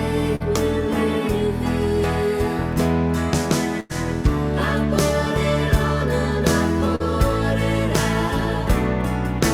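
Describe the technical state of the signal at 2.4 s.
At 2.4 s the signal is intact, with no audible fault at that moment.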